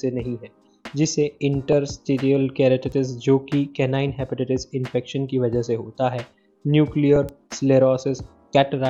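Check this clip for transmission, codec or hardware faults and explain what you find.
Two bit error spikes occur, at 2.92 s and 7.29 s. A flipped bit in storage or on a digital link knocks one or two samples off by a power of two, giving isolated broadband ticks peaking around -28 dBFS and -16 dBFS.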